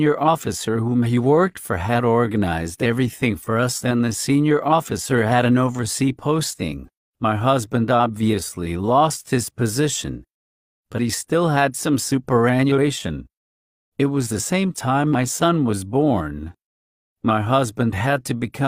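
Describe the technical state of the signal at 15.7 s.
At 15.7 s the signal is intact, with no dropout, clipping, distortion or other fault audible at that point.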